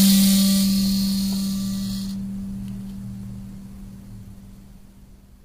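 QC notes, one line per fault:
Throughout, low-delay AAC compression: the audio likely passed through a low-delay AAC encoder, such as the AAC-ELD used in video calls, starved of bits, which fits a rate near 24 kbps. Its very short frames cannot separate closely spaced harmonics cleanly, so the music sounds rough and grainy, with noise filling the gaps between tonal lines, and no content at all above 15.7 kHz, leaving the top end dulled.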